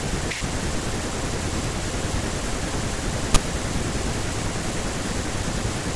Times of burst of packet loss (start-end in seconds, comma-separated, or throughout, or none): none